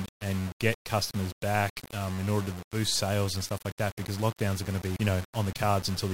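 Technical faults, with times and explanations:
Throughout: low bit depth without dither. The speech has a grainy, gritty texture that moves with the signal, getting rougher as the level drops, with quiet tails breaking up or sputtering instead of fading cleanly. It sounds like the audio was likely rounded down to about 5 bits with no dither, so the rounding error tracks the waveform and shows up as distortion rather than a steady hiss. The error sits only around 15 dB below the speech.
4.96 s: CD skip. Right after "lockdowns are going to" there's a tick and a very brief dropout, roughly a hundredth of a second, and then the audio carries on from a different spot. That's the classic sound of the laser jumping, from a knock or a flaw, onto another turn of the disc's spiral. The player mutes for an instant while it relocks, then resumes from wherever it landed, so the flow of the speech jumps instead of continuing smoothly.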